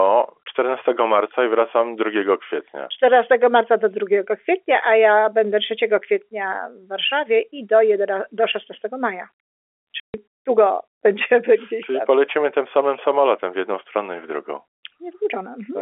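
At 10.0 s lost packets were replaced with silence, packet loss filled with silence, cutting a 140 ms hole with hard edges into the telephone-band speech.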